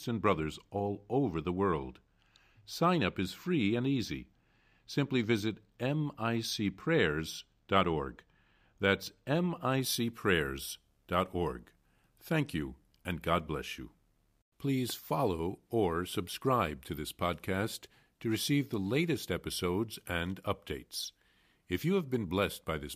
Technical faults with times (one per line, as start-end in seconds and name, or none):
0.00-9.81 channel delay (comb filtering)